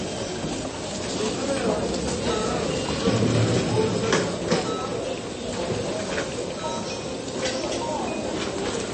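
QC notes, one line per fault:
Throughout, MP3 compression. Nothing is present above 8.3 kHz, so the top end sounds dull and closed in. Damage is plainly audible: quiet detail turns watery and swirly, and sharp attacks smear. Hiss-like and bright sounds pick up metallic chirps. The likely cause is an MP3 encoder starved of bits, which fits a rate near 30 kbps. It chops the treble at a fixed point and drops faint frequency lines that flicker on and off between frames.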